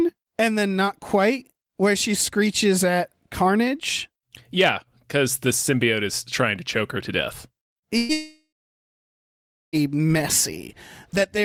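Just after "choke her to death", at 7.63 to 7.74 s, comes a burst of packet loss. About 80 ms of the signal never arrived in time. The receiver extended the last sound for about 73 ms and faded it down. The result is a short held buzz or hiss. The speech then picks up further on, with that slice gone.

At 7.79 to 7.85 s there is a short concealed packet loss. Only about 40 ms went missing. The decoder bridged the hole with about 30 ms of synthesised continuation, then blended back into the real speech. It is heard as a brief smear or wobble. A short consonant here can drop out entirely.

A second burst of packet loss follows at 7.98 to 8.12 s. This time about 120 ms was lost. About 112 ms of that was covered by the continued, decaying sound. It never falls to silence. The continued sound simply fades and the speech jumps ahead.

From 8.13 to 9.84 s the audio is interrupted by what is likely a long network dropout. 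About 1.6 s of speech is missing. The extended tail soon dies away. For about 1.26 s of the gap only silence remains. When the speech returns, the missing portion is not recovered.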